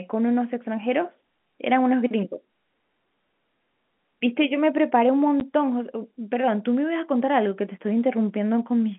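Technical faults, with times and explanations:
5.40 s, packet loss filled with silence: there's a brief hole of about 10 ms where the sound just drops out, with sharp edges on both sides. That length fits a single lost 10 ms packet, and the receiver had nothing to conceal it with, so it played plain silence instead. The abrupt jump from signal to silence and back sits on top of the narrow telephone-band G.711 sound.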